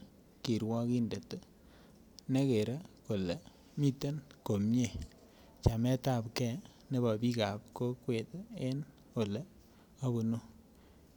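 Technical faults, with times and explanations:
No technical faults detected.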